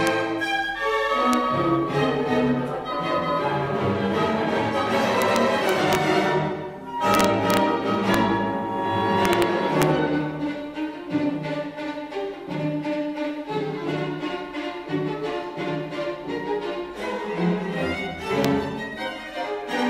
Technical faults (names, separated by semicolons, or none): integer overflow